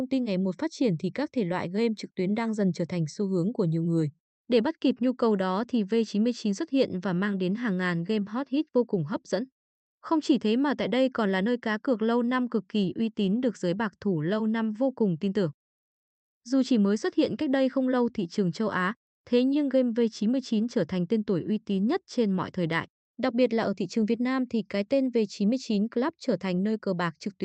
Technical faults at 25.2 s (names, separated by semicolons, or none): none